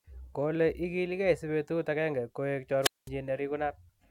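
At 2.81 s the speech is swallowed by a brief surge of hiss, then a hole of near silence lasting about 205 ms before the sound returns by 3.09 s. This is a wireless microphone squelch dropout: the FM radio signal faded until the receiver's squelch muted its output.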